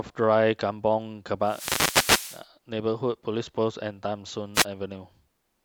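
At 1.43 to 2.46 s and again at 4.54 to 4.65 s, a wireless microphone noise hit breaks through: the radio link fades, receiver hiss surges into a swish of static over the speech, seen as a broadband vertical smear across the spectrogram and a thickened waveform envelope.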